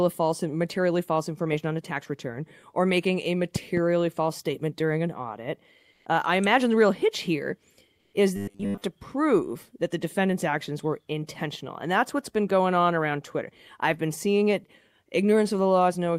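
At 3.56 to 3.80 s, between "return or making a" and "false statement during an", a loud pop strikes twice. It peaks about 10 dB above the speech, likely from a voltage pulse.

At 7.99 s, after "the real hitch here", comfort noise replaces the background for 120 ms. The level shifts about 4 dB. Discontinuous transmission is the likely cause.

From 8.36 to 8.82 s, before "to prove that the", the voice turns to a robotic buzz at 100 Hz. Most of it likely comes from repeated 10 ms buffers.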